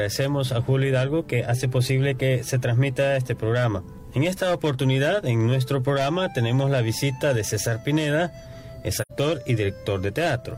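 The audio has one fault, AAC frame loss with muting, from about 9.00 to 9.12 s. Around 85 ms of sound drops out, which fits two lost frames. The decoder zeroed them, and the overlapping windows fade the gap in and out softly.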